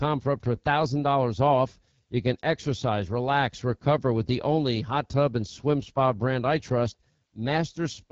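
From start to finish the speech has passed through the AMR wideband (HD Voice) codec at one of its lowest rates, with damage that fits roughly 8.85 kbit/s. At that rate the pulse-driven model of the vocal tract has too few bits to track the voice, so the sound turns rough and raspy throughout. The top band, above 6.4 kHz up to 7 kHz, is filled with shaped noise rather than real detail.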